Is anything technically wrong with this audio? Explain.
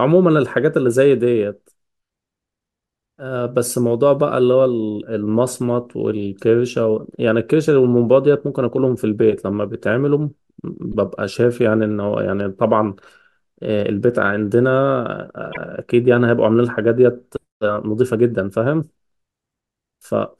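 Yes. Repeated frames occur in this speech at 10.91 to 10.96 s, where a 48 ms block plays twice, which fits two 24 ms codec frames, and at 15.52 to 15.57 s, where a single 24 ms block repeats. Compressed frames were duplicated, so each stretch stutters. On a waveform or spectrogram, an identical short pattern appears twice back to back.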